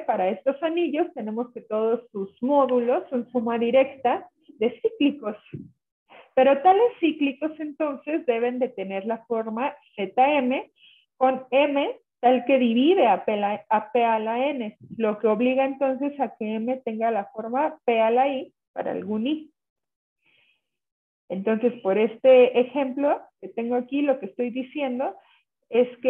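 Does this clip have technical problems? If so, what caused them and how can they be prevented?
No, nothing stood out as a technical problem on listening, so there is nothing here that needs preventing.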